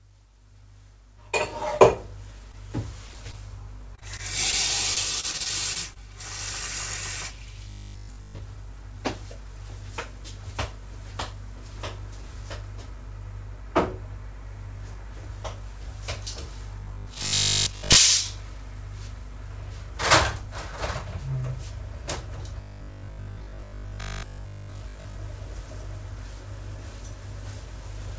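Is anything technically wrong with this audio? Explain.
Yes. The clip has four kinds of transmission fault, all typical of a real-time call path. The band above 8 kHz is empty throughout, consistent with a G.722 wideband codec.

A short stall from a late packet occurs at 2.52–2.55 s. A packet arrived after its playout time, so the jitter buffer ran dry. The receiver extended the preceding sound by about 15 ms, then resumed where it had stopped. Nothing is lost, but the sound hangs momentarily, with a faint buzz or slight dip in level.

Short concealed packet loss appears twice in quick succession, at 3.07–3.11 s and 3.13–3.16 s. Each time about 20 ms of audio never reached the decoder. The receiver synthesised a continuation of the last sound, about 18 ms and then about 10 ms, before crossfading back into the real signal. Each event is audible as a brief smear or wobble.

Repeated packet loss with a robotic quality affects two stretches. 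From 3.95 to 4.54 s there are four gaps, the longest 19 ms, with about 11% of the span concealed. From 4.94 to 5.98 s there are seven gaps, the longest 29 ms, with about 14% concealed. The patches come so close together that the sound turns choppy, with fragments missing throughout.

Robotic sound from repeated short buffers occurs at 7.65–8.39 s, 16.80–17.96 s and 22.61–25.15 s. Each stretch carries a steady 50 Hz buzz, which corresponds to a 20 ms loop. This is likely caused by fresh audio arriving too rarely, so the playback side kept replaying its last 20 ms block while most of the real signal was skipped. The sound becomes a rigid, metallic drone that only loosely follows the original.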